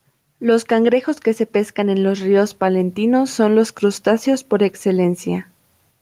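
Gain pumping runs through the whole speech clip. Loud and soft parts end up closer in level, and the sound is squashed. The level swings by around 5 dB. The likely cause is input gain set far too high, with a fast limiter clamping down on loud peaks.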